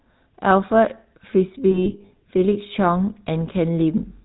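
From start to finish the speech carries the buzzy, gravelly roughness of the GSM full-rate codec, plainly audible throughout and consistent with the 13 kbps full-rate coder. The codec rebuilds the voice from a vocal-tract model excited by regularly spaced pulses, discarding two of every three excitation samples, so the result sounds harsh and grainy rather than smooth. On a spectrogram nothing appears above 4 kHz, and the harmonics below look smeared and noisy rather than cleanly striated.

Between 1.70 and 2.11 s, lost GSM frames break up the sound. About 260 ms of frames are missing, scattered over 400 ms, with the longest gap around a tenth of a second. Each gap is filled by repeating the last good frame's settings, which produces a rough, metallic ring in place of clean speech. On a waveform the envelope turns into short held stretches, and a spectrogram shows smeared, static bands during this stretch.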